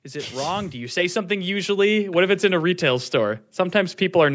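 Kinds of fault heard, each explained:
Automatic gain rising: the gain control judged the input too quiet and kept turning it up, so speech and background swell together by about 10 dB across the clip, a waveform envelope steadily widening.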